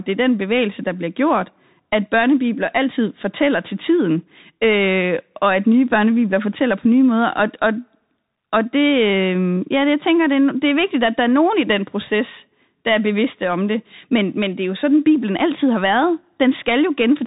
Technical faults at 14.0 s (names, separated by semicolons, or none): Bluetooth CVSD headset codec